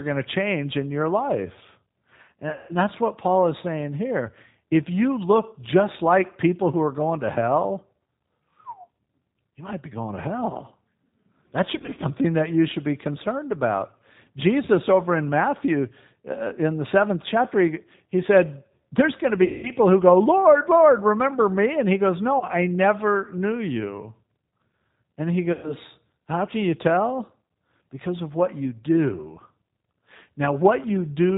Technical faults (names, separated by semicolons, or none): G.729 codec; VoIP packet loss concealed by the speech codec